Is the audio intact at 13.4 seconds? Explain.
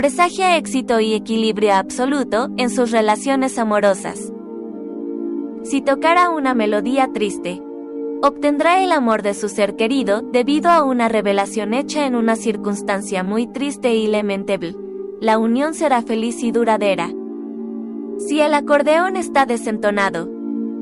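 Yes, the audio at 13.4 s is intact, with no fault to be heard at that moment.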